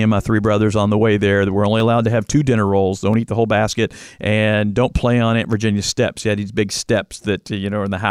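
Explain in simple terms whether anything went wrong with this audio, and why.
Three sharp clicks interrupt the speech: at 1.80 s, between "there that we're only" and "allowed to have two"; at 3.14 s, after "have two dinner rolls"; and at 5.53 s. These are most likely dropped samples, where a fraction of a millisecond goes missing and the waveform jumps abruptly.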